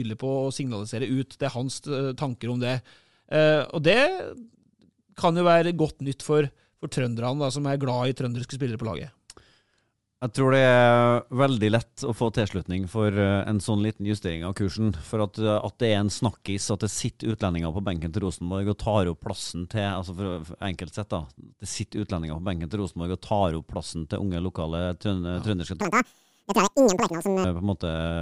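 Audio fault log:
25.81–27.44 s, wrong sample rate: speech runs at double speed, a full octave high, which points to audio recorded at 24 kHz being played at 48 kHz; on a spectrogram, formants and harmonics shift upward.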